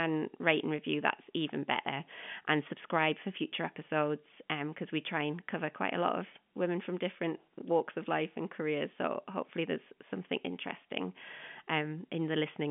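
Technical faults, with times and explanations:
No technical faults found.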